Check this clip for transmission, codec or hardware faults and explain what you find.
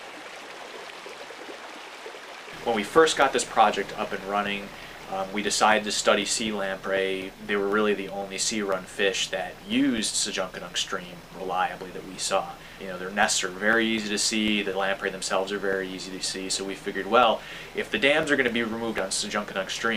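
Regular ticks run through the audio from 2.97 s to 19.73 s, four per second, each a brief gap of about two milliseconds of silence. These are periodic USB or driver dropouts: something stalls the bus or driver every 0.25 s and drops samples.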